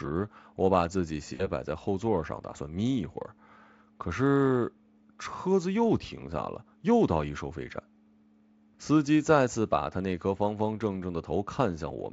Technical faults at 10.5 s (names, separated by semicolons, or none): none